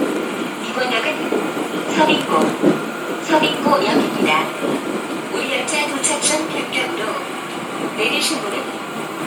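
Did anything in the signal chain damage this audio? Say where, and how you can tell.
Yes, at the codec stage, for the whole clip. The damage is plainly audible throughout: the upper range takes on a breathy, grainy texture rather than clean detail, while the band still reaches about 20.2 kHz, so this is not a low sample rate. The cause is likely Bluetooth LC3 compression. A transform codec working on short frames, consistent with 10 ms framing and a budget around 48 kbps, discards high-band detail and substitutes synthesized noise.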